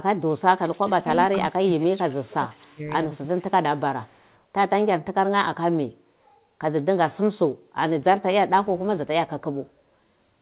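From 0.16 to 1.17 s, 1.38 to 2.81 s, 3.23 to 3.48 s and 4.06 to 4.10 s, the speech dips by up to about 35 dB in pieces. This is speech suppressed in double talk, likely from an echo canceller ducking the talker while the far side spoke. At 0.66 to 0.74 s, 2.17 to 2.22 s and 4.05 to 4.40 s, a faint copy about 25 to 40 dB down trails by 294 ms. This is echo leak, which can be told apart from reverberation by its fixed lag. Throughout, the band stops at 4 kHz, consistent with G.711.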